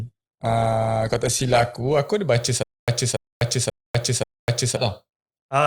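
For the first 2 seconds the speech sounds thin and smeared, with the top end dull and partly synthetic and nothing above about 12.5 kHz, before it snaps into clearer, fuller audio at 2.0 s with no break. This is an adaptive stream starting at a low bitrate. The player opened on a lean encoding, which fits roughly 16 kbit/s Opus, to start fast, then switched to a richer one, consistent with about 64 kbit/s, once it had gauged the connection.

From 2.63 s to 4.77 s the same short fragment of about 286 ms plays four times, each repeat followed by about 248 ms of dead digital silence, so the burst comes back on an even cycle of roughly 534 ms. This is stutter with silent gaps. The likely cause is a stalled stream, where each retry replayed the last buffered chunk and then ran dry. The audio meant for that stretch never arrives.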